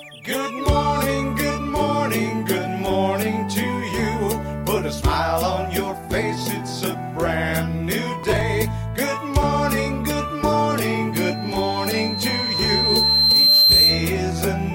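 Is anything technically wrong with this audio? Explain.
Yes, two faults. From 8.24 to 8.41 s there is processor overload crackle. The processor missed the deadlines for several audio buffers in a row, which fits buffers of around ten milliseconds, and each late one was skipped. Those hard-edged gaps stack into a brief gritty burst of crackle.

From 11.13 to 14.12 s there is loudspeaker feedback squeal. A microphone is picking up its own loudspeaker, and at 4.1 kHz the loop gain exceeds one. Over roughly three seconds, that tone swells into a piercing whistle about 10 dB above the sound.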